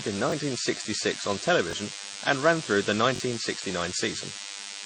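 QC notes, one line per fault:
throughout: DECT cordless phone buzz. A thin, steady 100 Hz buzz rich in harmonics sits about 15 dB below the speech. A nearby DECT handset or base transmits a radio burst every 10 ms, which the audio circuitry rectifies into this repeating tone.
throughout: transcoding between lossy codecs. Nothing is present above 9.9 kHz, and two different sets of compression artefacts are heard together. The likely cause is a low-rate MP3 stage followed by AAC-LC, each at around 32 kbit/s, with the second encoder spending bits on the first one's artefacts.
0.30–0.32 s, 1.71–1.73 s, 3.16–3.20 s: repeated buffer. A short stretch of about 21 ms is played again, once at the first two points and twice at the third, with hard joins that give a brief stutter. This fits a 1024-sample buffer replayed when new audio arrived late. Roughly 20 ms, 20 ms and 40 ms of audio are lost.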